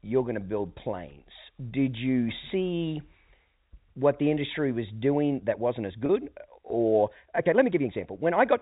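A time-stretched section runs from 5.09 s, just after "what the industry was", to the end of this speech clip: the pace jumps to about 1.35 times faster while pitch holds, sounding rushed, likely from software squeezing the audio by dropping short pieces. Packet loss with pitch repetition follows from 6.06 to 6.09 s, a 30 ms gap consistent with a single lost packet, bridged by repeating the last pitch period so it sounds briefly held and buzzy. All of this passes through G.711 A-law telephone coding, which cuts everything above 4 kHz.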